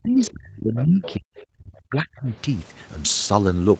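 From 0.0 to 1.29 s, the speech is suppressed in double talk. The level sinks by up to about 35 dB, and roughly a second of this stretch is pulled down or broken into pieces. The likely cause is an echo canceller meeting both sides at once and turning everything down. Inside that stretch, the other side's voice leaks through at 0.18 to 0.23 s, 0.76 to 0.83 s and 1.02 to 1.14 s. These are brief, faint scraps, about 20 to 25 dB below the speech. They are likely loudspeaker echo the canceller failed to remove. Later, the speech is suppressed again. From 1.58 to 1.73 s, it drops by about 40 dB, almost to nothing. From 1.90 to 2.31 s, it dips by about 25 dB. Both dips are likely the same double-talk gating. The call path limits the band, with nothing above 8 kHz.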